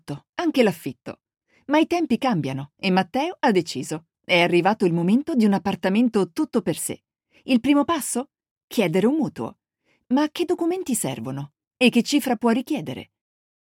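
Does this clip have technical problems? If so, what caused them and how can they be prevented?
Yes. From the start to about 8.12 s, a gritty, inharmonic fizz trails the louder and brighter moments, sitting roughly 35 dB below the sound. This is crude rate conversion: samples were linearly interpolated without filtering, which fits a 44.1 kHz to 48 kHz change, folding error into unrelated tones. Using a properly band-limited resampler prevents it.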